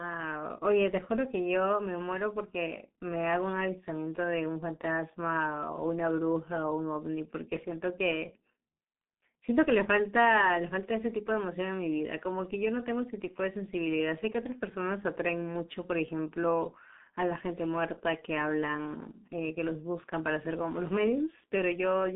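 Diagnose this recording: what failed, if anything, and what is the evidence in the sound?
The failure is at the codec stage: G.723.1 coding throughout. The speech is muffled and hoarse, consonants smear, and nothing sits above 3.8 kHz within a 200 Hz to 3.6 kHz line band. Slow 30 ms frame updates cause this heavy damage, which fits roughly 6 kbit/s.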